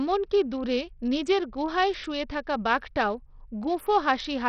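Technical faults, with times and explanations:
Throughout, Bluetooth SBC compression: the speech has likely passed through the SBC codec at a starved bit allocation, consistent with a low rate near 64 kbps, so the sub-bands are quantised coarsely and the weakest upper bands lose their bits. The result is heavy damage: the treble thins and flickers in and out, nothing is left above 16.6 kHz, and a gritty, aliased noise clings to the voice.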